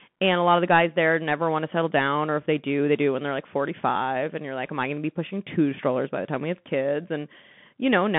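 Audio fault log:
Throughout: Bluetooth CVSD headset codec. The speech is squeezed into a phone band of about 150 Hz to 3.5 kHz. A spectrogram shows a hard ceiling near 3.7 kHz with a grainy noise floor. The one-bit slope tracking, which fits a 64 kbps CVSD stream, makes s sounds scratchy, lags on steep loud transients, and leaves a granular hiss under the speech.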